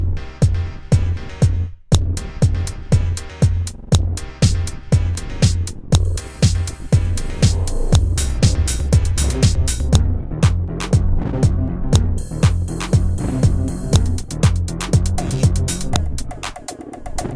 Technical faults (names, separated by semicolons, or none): file header played as audio